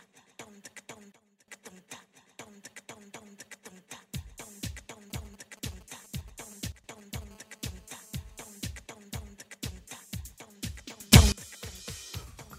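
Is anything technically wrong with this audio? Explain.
Yes, there are three kinds of fault.

Sudden gain jumps occur three times. The level drops by about 17 dB from 1.12 to 1.48 s and by about 12 dB from 6.72 to 6.84 s, then rises by about 24 dB from 11.12 to 11.32 s. Sound and background noise shift together, instantly. The likely cause is a digital gain change applied between two samples without a ramp. On a waveform, the envelope steps abruptly. A spectrogram shows a thin vertical broadband line at each transition.

GSM signalling bursts run from 5.10 to 7.24 s, roughly 15 dB below the main sound. A nearby 2G phone is exchanging short radio bursts with the network, and the audio circuitry rectifies them into audio. The result is a galloping dit-dit-dit of brief 217 Hz buzzes, unrelated to the signal. A spectrogram shows clustered blocks of evenly spaced harmonics at multiples of 217 Hz, separated by gaps.

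GSM phone buzz follows from 7.31 to 8.53 s, about 20 dB below the signal. Here the phone transmits steadily, as in a call, with bursts 217 times a second. Rectified, these make a hard, raspy, steady buzz rich in harmonics. A spectrogram shows an unbroken comb of horizontal lines spaced 217 Hz apart, reaching well up the frequency range. The waveform shows a regular train of sharp pulses.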